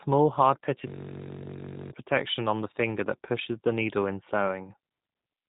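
Throughout the clip the speech carries plainly audible G.729 codec damage. Nothing above 3.8 kHz survives, which fits an 8 kbit/s G.729 stream. The voice is rebuilt from a vocal tract filter, a pitch predictor and a few coded pulses per frame, which makes it sound narrow, rough and slightly synthetic.

From 0.88 s to 1.92 s a system hang loop takes over. The host stalled while the audio hardware kept replaying one 21.3 ms section, 49 times in a row. That short loop produces a steady buzz at 46.9 Hz, which fits a 1024-sample buffer, and about a second of real audio is lost.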